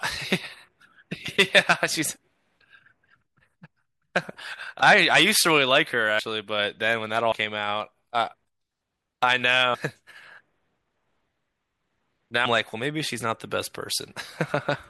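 Speech with brief jumps at 6.18, 7.31, 9.73 and 12.45 s, where the audio jumps ahead by roughly 100, 70, 150 and 150 ms. These are compressed frames skipped, with jumps fitting whole 24 ms frames.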